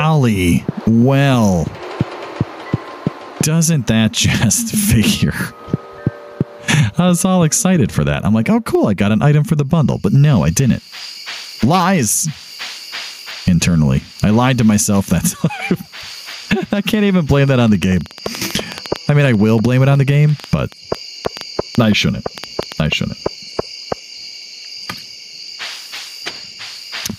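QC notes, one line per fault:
throughout: gain pumping. Likely gain set far too high with a fast limiter clamping each loud sound, so the gain swings about 15 dB under peaks.
17.48–22.87 s: train of clicks. Likely interference or a faulty connection injects around forty similar clicks, about 8 per second at uneven spacing, roughly as loud as the sound itself.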